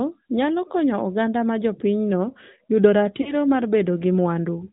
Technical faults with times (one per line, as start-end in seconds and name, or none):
0.00-4.72 AMR narrowband mobile codec
3.22-3.34 lost AMR speech frames